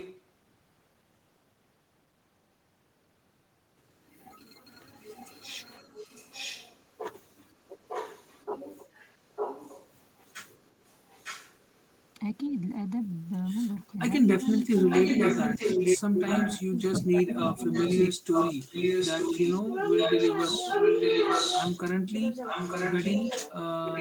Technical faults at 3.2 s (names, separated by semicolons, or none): none